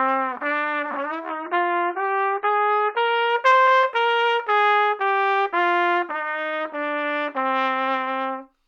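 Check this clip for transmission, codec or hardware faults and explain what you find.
One fault is audible: a stretch of adaptive stream at a lower bitrate. From 1.29 to 3.29 s the quality suddenly drops with no gap. The stream likely switched to a cheaper version, which fits MP3 falling from 128 to 16 kbit/s. Nothing above 5.2 kHz survives, and the sound turns dull and smeared.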